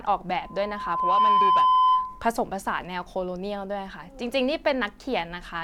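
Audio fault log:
0.42–2.26 s: loudspeaker feedback squeal. A steady 1 kHz tone swells over under a second, well above the speech. The microphone-speaker loop exceeds unity gain there.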